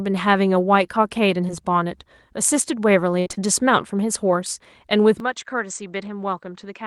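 At 1.47 to 1.50 s there's a short concealed packet loss. About 20 ms of the stream never arrived in time, and the receiver patched roughly 11 ms of it by carrying the previous sound forward before easing back into the real signal. The rest just drops out. You hear it as a quick smear or wobble.

From 3.20 to 3.41 s things get rougher: repeated packet loss, with the robotic sound that comes with it. There are four separate holes in that fifth of a second, the longest about 61 ms, and together about 120 ms goes missing. Concealment fills roughly 115 ms of that, so close to 59% of the stretch is synthesized continuation. That's why it comes across as choppy, with bits of the sound chewed out.

Then at 5.2 s the character changes and stays changed to the end. It's most likely the input switched to a poorer device. Everything above 8.2 kHz vanishes, so the sound goes duller and a bit boxier, and the level drops by roughly 10 dB. 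There's no gap at the changeover. A new noise floor comes in with it, sitting well down, somewhere around 55 dB below the signal.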